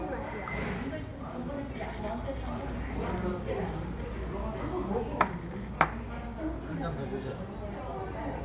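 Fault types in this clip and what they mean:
No faults can be heard anywhere in these sounds.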